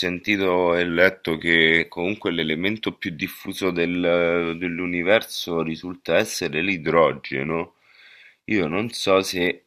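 A clock-matching process in the playback chain likely made a drift correction step twice in this speech clip, cutting the playback rate by 5.6% in one jump to rebalance its buffer. Because speed and pitch are tied together, the sound drops by 101 cents, roughly a semitone, and drags from 0.89 to 1.79 s and again from 6.86 to 7.53 s, then snaps back to its normal pitch and tempo at the end of each stretch.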